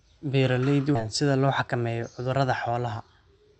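A skip ahead occurs at 0.95 to 0.97 s, just before "sida loo". About 0.7 s of speech was discarded, either lost in transit or flushed by the jitter buffer when it overflowed with later audio already queued. Playback jumps straight to the newer material with no fill, so the speech on either side is butted together almost seamlessly and the missing stretch simply vanishes. Around it, the call path's coding noise and a band limit near 8 kHz are audible.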